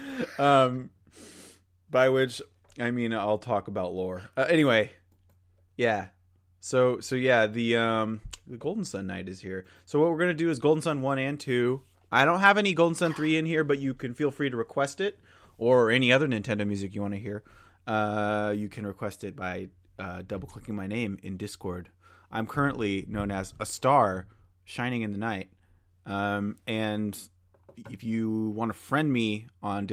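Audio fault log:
No fault is heard in this speech audio.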